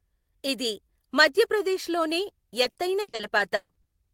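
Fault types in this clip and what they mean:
Repeated packet loss (robotic sound): packets dropped again and again from 2.63 to 3.87 s, each hole patched by extending prior sound, leaving choppy, robotic speech after "ఇది మధ్యప్రదేశ్లోనే".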